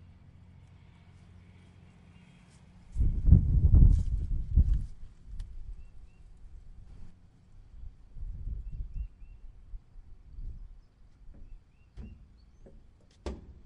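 A recording of everyday sounds carries a sudden gain jump from 6.87 s to 7.11 s, where the level rises by about 6 dB in a single step and drops back just as abruptly. The background noise rises and falls with it, which points to a digital gain change rather than anything in the scene. The likely cause is a gain setting or bit shift applied without a ramp. On a waveform the envelope forms a raised, square-edged block; a spectrogram shows a uniformly brighter band across all frequencies.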